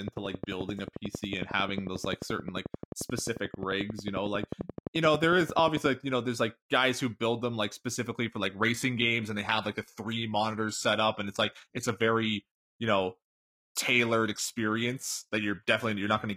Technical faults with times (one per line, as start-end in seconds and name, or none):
0.08-5.87 train of clicks
8.43-16.36 adaptive stream at a lower bitrate